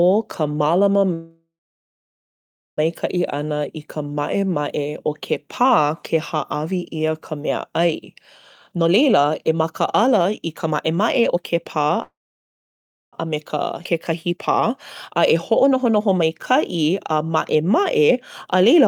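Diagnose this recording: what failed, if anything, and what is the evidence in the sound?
Call audio freeze at 1.13–2.80 s and 12.02–13.15 s. The sound trails into silence, then resumes intact. Likely cause: delayed network packets emptied the jitter buffer.

Jitter buffer speed-up at 8.72–12.00 s (124%), 13.24–14.70 s (111%) and 15.10–18.86 s (112%). Speech hurries at unchanged pitch. The buffer trims pitch periods to cut delay.

Skip ahead at 13.84 s. About 1.5 s of speech vanishes, and both sides join almost directly. Audio was dropped, on the way or by the jitter buffer, while later packets waited.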